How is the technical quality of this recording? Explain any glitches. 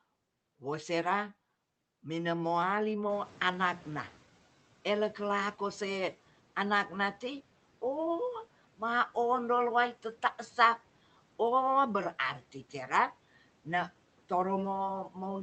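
The recording has one audible glitch, a noise suppressor catching up. The speech travels over a call path whose sound is band-limited at about 8 kHz and points to a low-bitrate Opus-style codec.

From 3.09 to 4.24 s, just after the room noise jumps by about 15 dB around the 3-second mark, the noise briefly comes through louder. The suppressor's noise estimate was still set for the quieter background, so it under-reduced the new noise. Over roughly 1.15 s the estimate catches up and the noise sinks by about 8 dB, settling around 24 dB below the speech. Unlike a noise gate or pumping, the fade is a single smooth slide.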